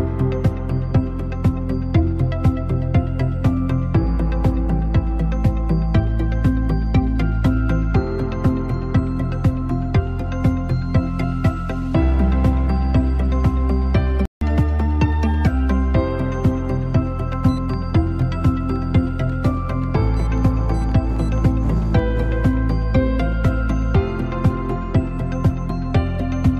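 At 14.25 s the output drops to silence for about 159 ms, returning at 14.41 s. This is a playback stall. The sound cuts off mid-flow rather than fading, and the gap is long enough to register as a hiccup, not a click. The likely cause is the player running short of buffered data or having its output thread blocked, so nothing reached the device until it recovered and resumed from the point where it stopped.

From 14.41 s to 15.47 s the audio runs at 1.15 times normal speed. This is catch-up at higher speed. Having fallen behind during the stall, the player resamples its backlog to drain it faster, so tempo and pitch rise together, with the pitch up by roughly two semitones. The effect is a brief, slightly chipmunk-like rush lasting about a second, after which speed and pitch snap back to normal once the lost time is made up.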